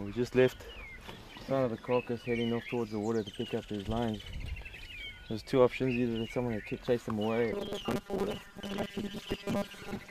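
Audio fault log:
7.53–10.1 s, robotic sound from repeated short buffers: new audio likely arrived too seldom, so about half the stream is a replayed 5 ms fragment while real audio is skipped. The repetition stamps a fixed 200 Hz buzz onto the sound, making it rigid and metallic.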